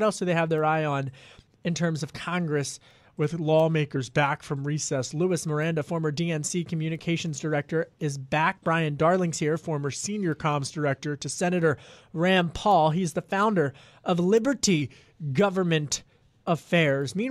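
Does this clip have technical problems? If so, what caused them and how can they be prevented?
Yes. A drift correction step is the likely cause of three stretches, at 3.19 to 5.20 s, 9.57 to 11.39 s and 14.82 to 15.33 s, where the speech slows by about 6.4% and drops by 115 cents, a little over a semitone, before snapping back to normal speed. Software reconciling two clocks seems to have changed the playback rate in one jump to rebalance its buffer. Using gradual, inaudible resampling for clock correction instead of single large rate steps would prevent this.

Damaged data in a compressed stream causes a brief blip at 3.95 s and another at 16.58 to 16.60 s. Corrupted bytes made the decoder misread or reject the frames there, lose sync and skip ahead to the next valid frame header. Carrying the stream over a transport with error checking and retransmission, and verifying stored files with checksums, would prevent it.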